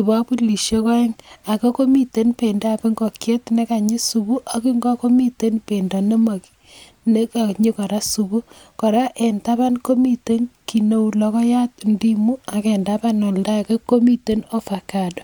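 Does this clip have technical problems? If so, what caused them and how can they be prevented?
No, no technical problem can be heard in this speech clip. There is nothing here that needs a cause traced or a preventive step.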